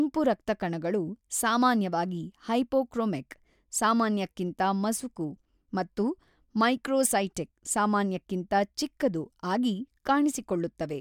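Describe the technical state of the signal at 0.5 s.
At 0.5 s the signal is intact, with no audible dropout, distortion, clipping or other technical fault at that point.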